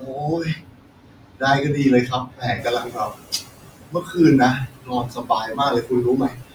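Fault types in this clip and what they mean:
Noise suppressor artifacts: Throughout the speech the background is turned down band by band, frame by frame, so it sinks in pauses and swells under speech. This is the noise shifting, whereas speech cuts remove parts of the speech itself.
Speech cut by the noise suppressor: From 0 to 1.43 s, 2.05 to 4.18 s and 4.53 s to the end, soft consonants and word endings are mistaken for noise and dropped by up to about 22 dB, sounding swallowed or faint rather than warbly.
Noise suppressor catching up: The room noise jumps by about 18 dB near 2.5 s. From 2.58 to 3.18 s it comes through under-reduced, then sinks by about 14 dB over 600 ms as the estimate adapts. This is a one-off lag after a rise, unlike the constant artifacts.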